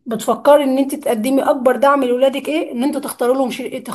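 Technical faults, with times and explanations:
0.48–0.55 s, hard clipping: a brief crackle and slight roughness rides on the loudest moments of the speech here, a gritty edge rather than a sustained fuzz. The signal peaks ran about 1 dB beyond what a stage in the chain could pass, so their tips were sliced flat. Those squared-off tops generate harmonics high in the spectrum, and because the overload is small, they register as a short rasp only where the peaks are cut.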